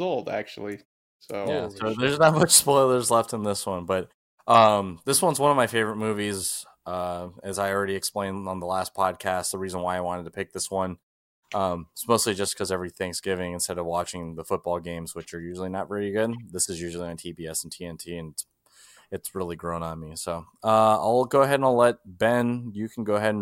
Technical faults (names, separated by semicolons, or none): none